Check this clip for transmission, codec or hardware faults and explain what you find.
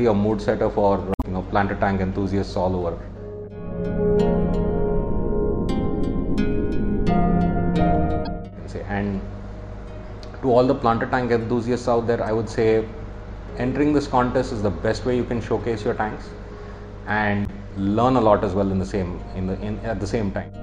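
There is one codec fault: damaged data in a compressed stream, at 1.11–1.25 s, 8.25–8.27 s and 17.45–17.50 s. Corrupted bytes make the decoder misread frames and lose sync until it finds a valid header. Each spot is a short glitch.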